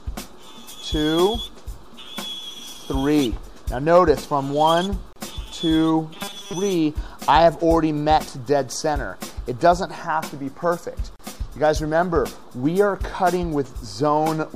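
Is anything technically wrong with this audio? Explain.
Yes, there are two kinds of fault.

A gap at a join of encoded pieces appears at 5.13 to 5.16 s (about 33 ms) and again at 11.16 to 11.19 s (about 34 ms), six seconds apart. Separately encoded segments were joined with their encoder delay and end padding left in. On a waveform this shows as a flat, near-zero notch with slightly softened edges; on a spectrogram it is a thin vertical blank stripe. The sound then resumes where it stopped.

Robotic sound from repeated short buffers runs from 6.16 to 6.53 s as a rigid, metallic 200 Hz buzz. The likely cause is late-arriving audio, with the software filling the time by looping a very short slice, which fits a 5 ms repeat, for most of that stretch. A spectrogram shows evenly spaced horizontal harmonics at multiples of 200 Hz, and the waveform repeats roughly.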